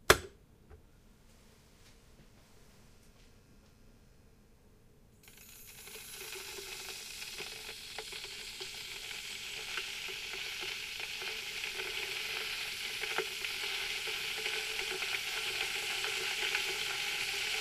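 Nothing technically wrong turns up in this recording of sounds, so there's nothing here to flag.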